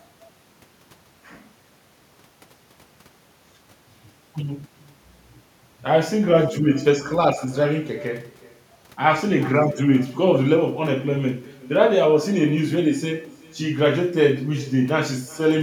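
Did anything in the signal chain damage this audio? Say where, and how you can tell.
Yes: echo with no canceller, in call processing. The far-end loudspeaker leaks into its microphone and returns a thin copy about 21 dB down, roughly 0.4 s later: a discrete repeat, not diffuse reverb.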